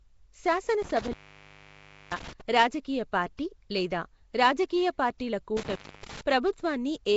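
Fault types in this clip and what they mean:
Nellymoser compression: Speech carries a rough, hissy halo and a smeared, underwater quality, with plainly audible damage and nothing above 7.7 kHz. The likely cause is the Flash-era Nellymoser Asao codec, around 32 kbps, starving weak bands of bits and filling them with noise.
intermittent contact: The sound drops out or breaks up, with crackle at the edges, from 0.82 to 2.41 s (open for about 0.99 s) and from 5.57 to 6.21 s (open for about 0.28 s). A loose cable or plug briefly opened the signal path.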